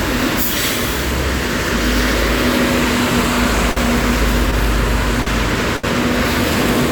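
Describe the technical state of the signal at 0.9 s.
At 0.9 s the signal is intact, with no dropout, clipping, distortion or other audible fault in the sound at that point.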